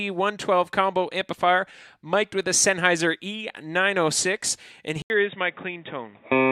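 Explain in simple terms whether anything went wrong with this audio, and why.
At 5.02 s the sound drops out for 80 ms, then returns duller, a little quieter and with new background hiss, with nothing above 3.8 kHz. That gap plus the changed tone, level and noise points to the input likely being switched to a poorer device, not a simple filter.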